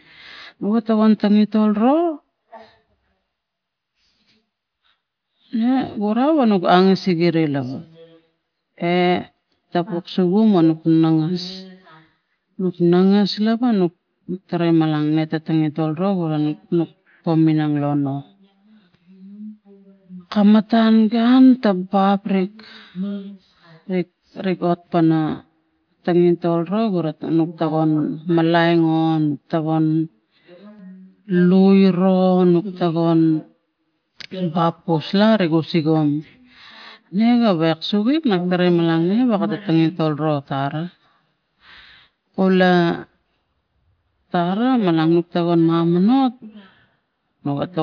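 Nothing technical goes wrong anywhere in this speech recording, so there's no fault to point to at any moment.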